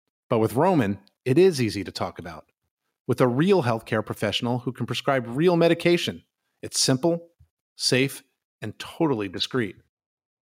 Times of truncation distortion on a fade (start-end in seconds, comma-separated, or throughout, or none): none